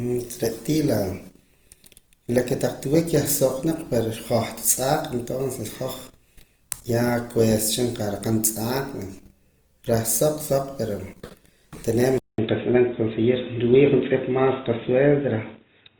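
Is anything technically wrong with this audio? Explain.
Yes, there are two faults in this speech clip.

Throughout, the audio sounds grainy and rough, with noisy texture where tones should be clean. This is likely Opus compression in its music mode at a low rate, around 24 kbps. Lacking the bits, the encoder fills bands with folded or noise content. A spectrogram keeps full bandwidth up to about 20.2 kHz but shows smeared, speckled harmonics.

From 12.18 s to the end, after a 200 ms silence, the input likely switched to a poorer device. The sound turns dull and boxy, with a new faint noise floor roughly 55 dB below the signal and little change in level. A spectrogram shows a hard ceiling near 3.8 kHz, and the waveform shows a flat gap at the switch.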